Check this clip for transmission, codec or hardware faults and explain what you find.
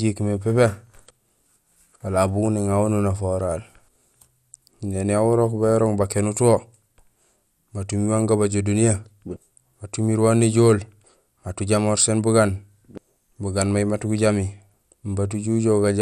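One codec fault is present across the whole clip. MP2 compression, throughout: likely Layer II sub-bands starved of bits, consistent with about 80 kbps, leave the speech dull, gurgling and granular, with nothing above 15.9 kHz.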